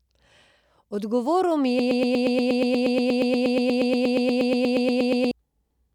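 At 1.79 s the speech locks into a broken-record loop: a 119 ms scrap repeats exactly, back to back, about 30 times until 5.31 s. It's likely the player or stream stalled and kept resending its last fragment, so the real audio for that stretch is gone.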